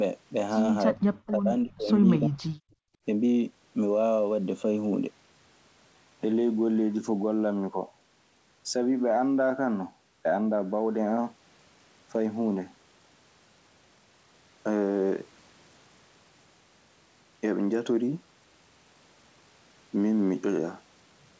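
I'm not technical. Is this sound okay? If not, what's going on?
No. Speech suppressed in double talk happens at 0.94 to 1.01 s, 1.31 to 1.89 s and 2.18 to 2.37 s. The voice briefly dips deeply or nearly vanishes, likely because the other side talked at the same moment and the echo canceller turned everything down.

An echo leak appears at 1.27 to 1.31 s and again at 2.70 to 2.74 s. It is a faint, short scrap of the voice coming back about a third of a second late, likely from a loudspeaker echo the loudspeaker side failed to remove.

Background gated by the echo canceller occurs from 2.65 to 3.0 s. The room sound drops out sharply for about a third of a second while the loudspeaker plays, because the canceller clamps the microphone down, then it comes back.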